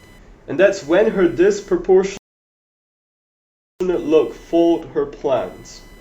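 Load changes in the computer's processor, graphics card or mouse are disturbing the ground that the audio circuit shares, and that interference is present from start to finish as computer activity noise. It sounds like a fine buzzing chirp pulsing at around 1 kHz, sitting roughly 35 dB below the speech. It rises and falls with what the machine is doing rather than with the talking, so it carries on through pauses.

At 2.17 s the player runs out of downloaded audio and halts in a rebuffering stall until more data arrives. The speech drops abruptly to silence and picks up again at 3.81 s exactly where it broke off. Nothing is skipped, but the gap inserts about 1.63 s of dead air into the middle of the speech, which disrupts its timing and flow.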